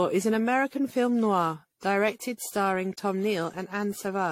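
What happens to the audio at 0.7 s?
At 0.7 s the speech sounds swirly, hollow and smeared, with blurred attacks and nothing above 16.6 kHz. This is generation loss throughout, likely from roughly ten successive AAC-style lossy re-encodes.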